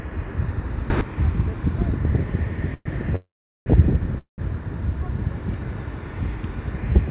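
A short recording of everyday sounds, heard through a call path that tops out around 4 kHz, consistent with G.711 A-law. At 0.9 s there's a sudden gain jump: the sound and the background noise both rise by about 13 dB at once and hold there until about 1.01 s, likely a gain setting applied without any ramp. Then come three call audio freezes, at 2.74 to 2.87 s, 3.16 to 3.68 s and 4.18 to 4.40 s. Each one smears the last bit of sound into a fading buzz that dies to near-silence, for roughly 400 ms in the longest. Then the sound resumes where it stopped with nothing lost, just pushed later, likely from packets stalling and the jitter buffer running dry.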